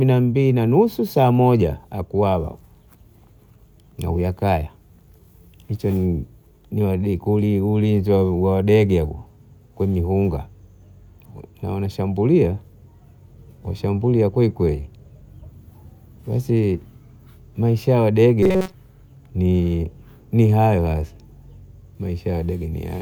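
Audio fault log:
18.43–18.74 s robotic sound from repeated short buffers: audio likely arrived too late, so a roughly 5 ms buffer looped over most of this stretch, imposing a metallic 188 Hz buzz.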